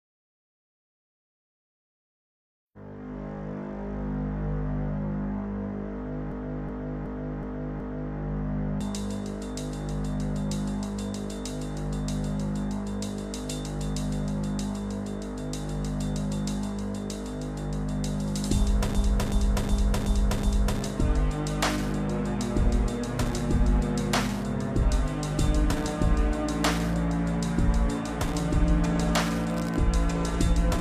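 From 6.32 to 8.17 s and again from 18.95 to 20.81 s, a system hang loop repeats one 0.37 s segment five times at about 2.7 Hz, a stuttering replay consistent with a 16384-sample ring buffer cycling while the host stalled.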